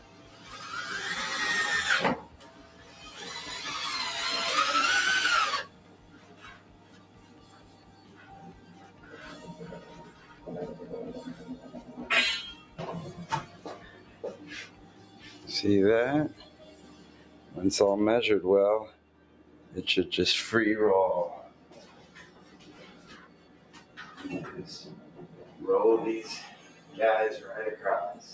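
Throughout, a noise suppressor applied to music or sounds treats steady parts as noise. The level swings by roughly 15 dB, so the audio pumps rather than fading evenly. Sound is cut by the noise suppressor at 0.0–0.46, 2.3–3.01, 5.68–10.42, 12.63–19.72 and 21.5–26.95 s, with drops of about 6 to 7 dB. Sustains and tails sink while attacks survive, which is why this is not a dropout. The call band limit at 8 kHz sits alongside it.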